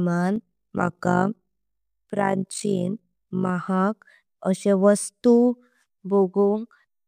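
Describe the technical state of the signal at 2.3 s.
At 2.3 s you're right in the middle of an overlap-add ripple that runs from 0.36 s to about 3.51 s. The speech was chopped into windowed frames and stitched back together with overlaps that don't add up to a steady gain, so the level dips and swells once per frame, by about 11 dB, at something like 50 times a second. To the ear it's a fast, buzzy flutter, a rough robotic tremolo riding on the speech.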